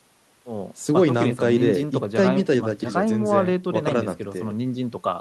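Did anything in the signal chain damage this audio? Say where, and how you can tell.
No, no damage is audible.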